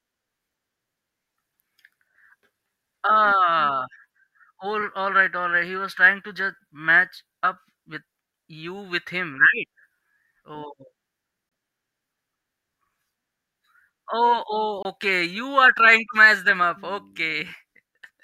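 At 11.49 s and again at 14.82 s the speech cuts to silence for about 23 ms, and then carries on as though it had kept playing underneath. That points to a likely Bluetooth dropout, a single lost packet's worth of sound that never reached the headphones. Unlike a buffer stutter or a skip, nothing repeats and the timeline does not jump. The gap is empty, and the timing after it stays intact.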